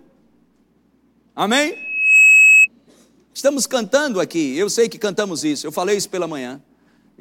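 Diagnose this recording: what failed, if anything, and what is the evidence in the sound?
Loudspeaker feedback squeal from 1.72 to 2.68 s, in the acoustic loop between microphone and loudspeaker. A single 2.6 kHz tone swells over a few tenths of a second to around 10 dB above the speech: the microphone re-amplifies the loudspeaker, and loop gain exceeds one at that frequency.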